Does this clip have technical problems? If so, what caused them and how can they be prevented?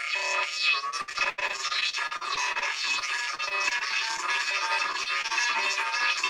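Yes: repeated packet loss gives a choppy, robotic sound at 1.01–2.63 s (worst, gaps up to 83 ms), 2.99–4.20 s and 4.92–5.32 s, where dropped or late packets were patched by stretching the previous sound. A steadier network and a larger jitter buffer would prevent it.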